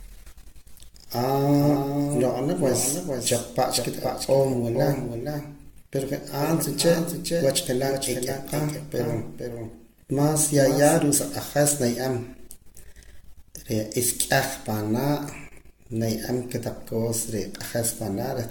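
Speech throughout carries generation loss: a swirly, hollow smear and blurred attacks worse than a single encode would give, likely from roughly seven AAC passes at a rate pointing to 96 kbit/s. From 1.17 to 10.99 s there is a doubled audio track, a full-band copy about 5 dB quieter trailing by roughly half a second. It is likely a second capture path, not an echo, since it has no decay or room colour and starts and stops abruptly.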